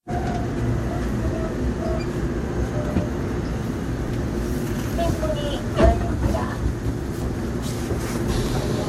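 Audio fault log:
4.08–4.10 s and 8.46–8.49 s, chunks out of order: in each spot one 11.61 ms chunk plays a chunk late, swapping with its neighbour. Nothing is lost, but three hard joins give a brief jumbled moment. The waveform shows abrupt steps, and the spectrogram shows thin vertical broadband lines.
6.67–7.06 s, frames out of order: two adjacent blocks of about 186 ms each, consistent with runs of four frames, are decoded in swapped order, so the stretch plays with its halves exchanged. It sounds like a garbled flutter. The spectrogram shows content jumping back and forth, with vertical seams at each joint.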